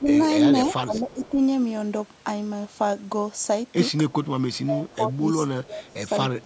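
From 0 to 1.4 s the speech dips by up to about 15 dB, in pieces totalling around 0.7 s: speech suppressed in double talk, likely an echo canceller ducking the talker while the far side spoke. Within that stretch, at 0.25 to 0.3 s and 0.69 to 1.29 s, a faint copy trails 324 ms behind, roughly 20 to 25 dB down. This is echo leak, likely loudspeaker pickup the canceller failed to remove. The same 324 ms echo returns, fainter, at 4.1 to 4.58 s. From 4.61 s to the end the speech is suppressed in double talk again, dropping by up to about 20 dB for roughly 1.5 s in total, likely the same ducking. A very faint echo scrap appears at 5.9 to 5.94 s, likely residual leak.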